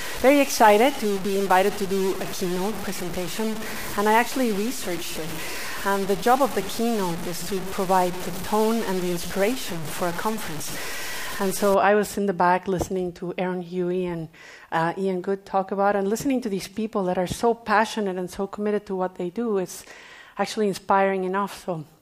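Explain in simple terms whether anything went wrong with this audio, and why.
From the start until about 11.74 s, the audio is coated in a grainy, gritty distortion, only somewhat quieter than the sound itself, and the quietest moments break up or sputter rather than fading smoothly. This is low bit depth without dither. The likely cause is that the audio was stored with very few steps of loudness, which fits about 5 bits, and each value was simply cut down to the step below, so the rounding error tracks the sound as grit.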